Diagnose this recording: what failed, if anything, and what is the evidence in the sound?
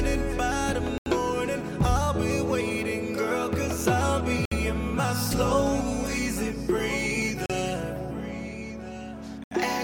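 Four short dropouts to silence at 0.98, 4.45, 7.46 and 9.44 s (about 37 to 81 ms each), resuming cleanly: likely Bluetooth stalls, with the headphone buffer running dry.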